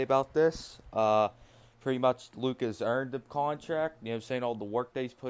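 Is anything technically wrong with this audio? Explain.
No, nothing technically wrong can be heard here.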